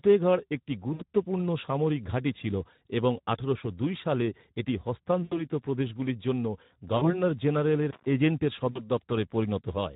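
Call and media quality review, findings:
Speex codec at 11 kbps throughout: too few bits for the excitation, so the speech sounds hoarse and noisy, with only a shaped noise fill in the highs.

VoIP packet loss concealed by the speech codec at 0.94–1.03 s, 5.23–5.44 s, 6.97–7.20 s and 8.71–8.85 s; 60, 80, 40 and 40 ms lost. Decoder extrapolates, giving a fading smear, then a weak recovery.

Intermittent contact at 7.83–8.06 s: loose cable or plug opens for about 120 ms. Audio drops out with crackle at both edges and faint hiss in the gap.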